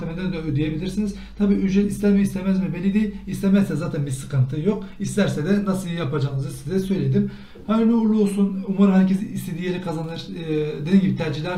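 Nothing stood out as a technical problem on listening to this audio.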